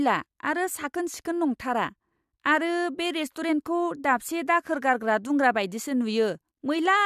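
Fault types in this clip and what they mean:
No fault types are present in this clip.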